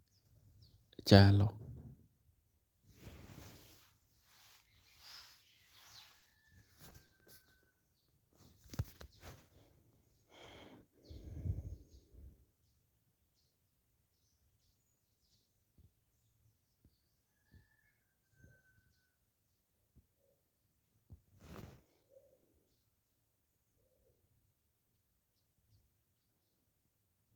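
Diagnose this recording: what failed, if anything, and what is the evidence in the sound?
Repeated packet loss (robotic sound), 6.11 to 6.38 s, at the network stage: several gaps, the longest 30 ms, were filled by extending preceding audio over about a third of the stretch, sounding choppy.

Short concealed packet loss, 7.07 to 7.11 s, also at the network stage: about 20 ms arrived too late for the decoder and was synthesised from the previous sound, leaving a brief smear.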